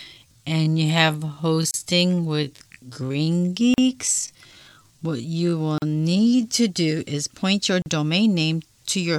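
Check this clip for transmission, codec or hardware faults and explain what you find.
Two faults are present: a slowed, time-stretched opening and a series of short dropouts at regular joins.

From 0.0 to 6.43 s there is a time-stretched section. The speech runs at about 0.61 times normal pace with unchanged pitch, likely from software repeating short pieces to fill a length, so it drags until normal pace resumes at "to do is point". A spectrogram shows stretched harmonics.

There are gaps at joins of encoded pieces at 1.71–1.74 s (30 ms), 3.74–3.78 s, 5.78–5.82 s and 7.82–7.86 s (40 ms each), every 2.0 s. The last falls between "do is point your" and "domain name to your". Encoder start delay and end padding were left in at each join. Each gap is a brief hole in the sound, visible as a flat-line notch in the waveform and a thin vertical blank stripe on a spectrogram.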